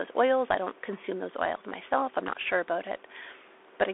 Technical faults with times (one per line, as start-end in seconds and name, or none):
0.00-3.93 Bluetooth CVSD headset codec